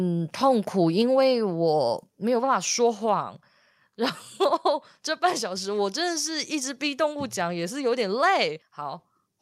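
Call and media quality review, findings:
Sudden step down in level of speech and background at 2.04 s, about 2 dB quieter afterwards. Microphone volume stepped down, likely by call software lowering mic input gain in one step.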